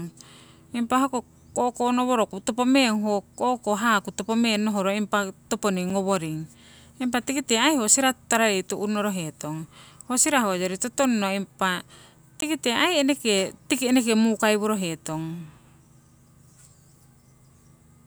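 At 5.90 s and again at 12.41 s there's a block of digital silence, about 5.8 ms and then 17 ms of silence. The first lands as a little tick and the second as a short hole, and the first one's length fits a 256-sample buffer.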